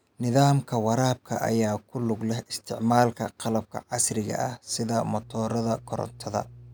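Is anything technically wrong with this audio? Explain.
Yes. Mains hum enters at about 5.19 s, right after "qalabka casriga ah sida", and runs to the end of the clip. It is a steady low tone at 60 Hz with some low harmonics. It sits about 20 dB below the speech. Power-line current is getting into the signal path. A ground loop or a transformer near the cabling is the usual route. The hum does not follow the speech. It simply drones on beneath it.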